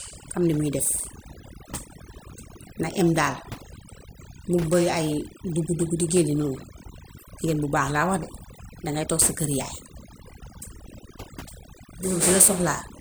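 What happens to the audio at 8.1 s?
At 8.1 s the speech carries overdone noise removal, present across the whole clip. An over-aggressive noise reducer pulls individual frequency bands down whenever they sit near its noise estimate, taking quiet vocal detail along, so the background drops and breaks up into twinkling specks. Unlike a noise gate, the dropouts are scattered across frequency rather than the whole signal cutting out at once.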